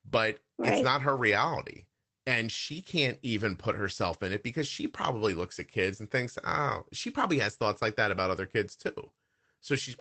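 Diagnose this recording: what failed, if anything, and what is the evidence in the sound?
Network stage: two lost packets rebuilt from error correction, at 0.67 s just before "it's not her" and at 1.71 s right after it. Each 20 ms frame is a rougher, noisier in-band copy, so there's no gap.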